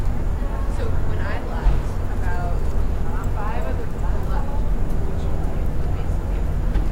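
Nothing in this everyday sound recording trips any alarm, with no dropouts, glitches or other technical faults turning up at any point.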